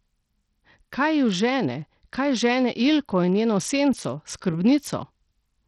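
From start to end, the speech carries heavy coding damage that likely comes from Bluetooth SBC compression at a starved bit pool, about what a 64 kbps stream would allow. The top sub-bands get too few bits, so the treble flickers in and out, and the coarse quantisation lower down leaves a gritty grain and aliased hash on the voice. A plain low-pass filter would cut the treble cleanly, and a perceptual codec would smear it into swirling artefacts.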